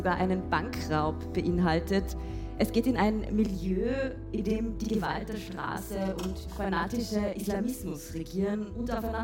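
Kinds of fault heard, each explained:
Channel delay (doubling): from 3.46 s to the end, one channel runs about 43 ms late, fitting a 2048-sample buffer, so the mono sum doubles every sound with an equal-level slap.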